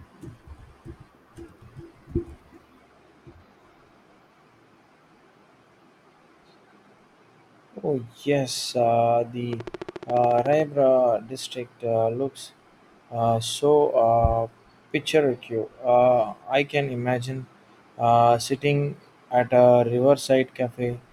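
A speech recording with a train of clicks from 9.53 s to 10.61 s: around fifteen sharp, near-identical ticks at a steady 14.1 per second, peaking roughly 5 dB above the speech. On a waveform they appear as evenly spaced narrow spikes standing above the signal; a spectrogram shows a comb of thin vertical broadband lines. The regular spacing points to a likely cause in nearby equipment interference or a faulty connection or power supply.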